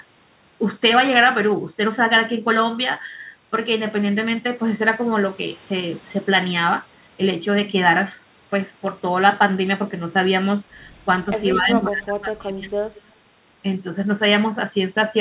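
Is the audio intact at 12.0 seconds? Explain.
No. From 11.54 to 12.71 s the speech is suppressed in double talk: the level sinks by around 25 dB at its deepest, affecting about a second in all. Most likely the echo canceller couldn't separate the talker from returning loudspeaker echo while both sides spoke, so it turned both down. On a waveform the envelope sinks; a spectrogram shows faint bands, already bounded at the call path's 4 kHz ceiling.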